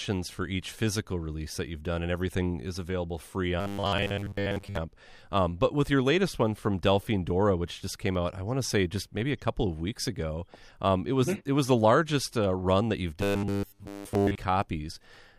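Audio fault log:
3.60 to 4.77 s and 13.21 to 14.36 s, robotic sound from repeated short buffers: the speech turns into a rigid, metallic buzz locked at 100 Hz that still loosely tracks the syllables. The likely cause is audio arriving too slowly, so roughly 10 ms pieces are looped to fill most of each stretch. Unlike a mains hum, the buzz exists only within these stretches.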